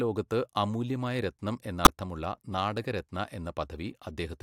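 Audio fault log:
1.84–1.87 s, corrupt frame decoded: Just after "ലോകത്ത് അമൂല്യമായ രത്നം", a short glitch breaks into the speech, peaking near -10 dBFS. A single compressed frame appears damaged. The decoder still played it, so misread values put energy at the wrong frequencies for that instant.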